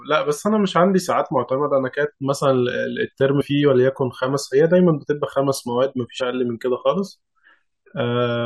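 A brief jump at 3.4 s and again at 6.2 s, where the speech lurches forward slightly, each time losing roughly 40 ms of audio. These are compressed frames skipped: whole blocks of the coded stream were missing or rejected by the decoder as damaged, so playback jumps ahead by that much.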